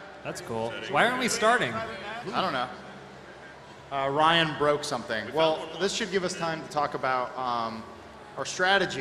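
No technical faults can be heard anywhere in it.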